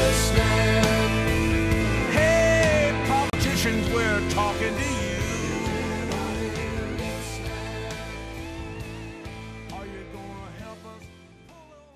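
Around 3.30 to 3.35 s the audio drops out for about 32 ms, then carries on. It's likely a Bluetooth stall, where delayed packets starved the headphone buffer.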